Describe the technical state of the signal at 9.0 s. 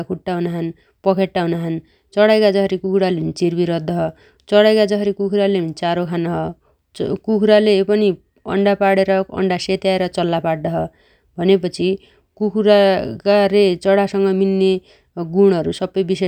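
At 9.0 s the speech signal is intact, with no audible fault at that moment.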